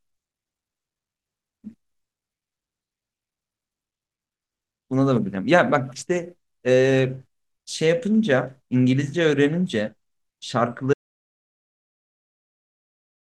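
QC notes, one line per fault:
10.94 s to end: audio dropout to silence. Speech cuts off mid-flow into silence with no room tone, likely from lost input while recording continued.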